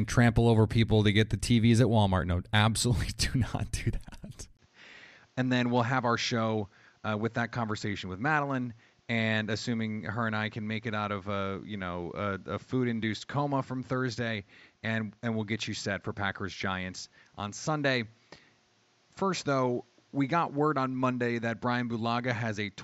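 At 4.57 s the speech breaks for 20 ms, then returns duller, roughly 10 dB quieter and over a new noise about 35 dB down, to the end: the input likely switched to a poorer device. A spectrogram goes blank above 7.6 kHz; the waveform shrinks after a thin gap.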